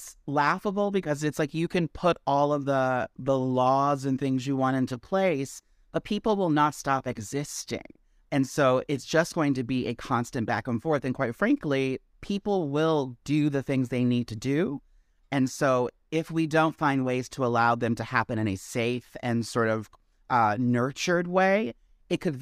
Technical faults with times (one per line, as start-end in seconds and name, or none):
none